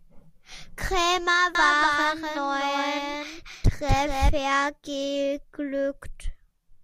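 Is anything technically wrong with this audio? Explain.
Yes. A doubled audio track runs from 1.55 to 4.29 s. A second copy of the speech is mixed in about a third of a second behind the original and a few dB quieter, so every syllable is followed by a clean repeat. The repeat has no decay or room colour and cuts in and out abruptly at those times. The likely cause is the same signal arriving twice, once through a slower capture path or from an edit that left two copies out of step.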